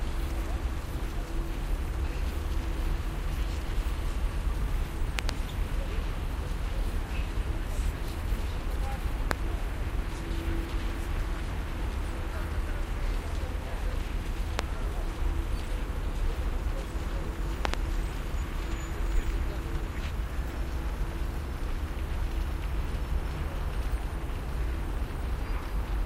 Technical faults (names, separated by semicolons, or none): loud pop